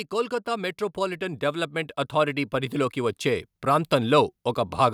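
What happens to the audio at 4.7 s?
Nothing goes wrong at 4.7 s: the speech there plays through intact, with no dropout, click, distortion or other fault.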